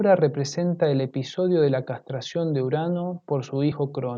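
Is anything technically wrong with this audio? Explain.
Yes. At 3.71 s there are compressed frames skipped. A couple of frames, which fits a 24 ms frame length, never reach the output, so the speech jumps ahead by roughly 50 ms. A hard dropout would leave a gap or a sharp click.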